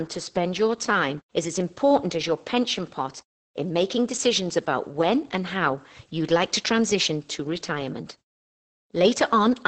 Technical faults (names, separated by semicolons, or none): Opus voice compression